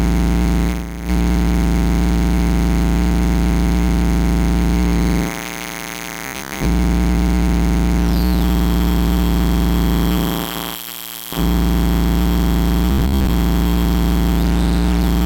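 From 6.26 to 6.65 s, and again from 12.92 to 13.34 s, the audio takes on a robotic sound from repeated short buffers, a rigid metallic buzz near 66.8 Hz. The likely cause is audio arriving too seldom, so a segment of about 15 ms is replayed in place of missing material: most of the first stretch and about half of the second. A spectrogram shows evenly spaced harmonics of 66.8 Hz, and the waveform shows identical short cycles.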